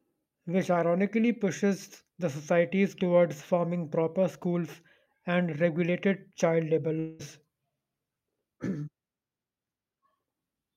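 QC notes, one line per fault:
6.99–7.21 s, long network dropout: right after "and regulated child labor" the speech gives way to a buzzy, fading smear of the last sound for about 0.2 s with no true silence, then picks up again with that stretch of speech missing rather than delayed. The likely cause is a break in the incoming stream, with the receiver filling the gap by stretching out what it last heard.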